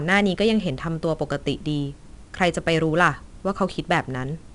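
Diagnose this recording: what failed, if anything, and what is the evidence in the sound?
4-bit ADPCM compression runs through the whole recording, so the failure sits at the codec stage. Every louder stretch of the speech carries a gritty, level-following hiss, plainly audible, and sharp onsets sound roughened where the adaptive step lags behind the attack. Each sample is coded as a coarse 4-bit difference from a prediction, so the error rises and falls with the signal. Nothing is present above about 10.6 kHz, which fits a sample rate near 22 kHz.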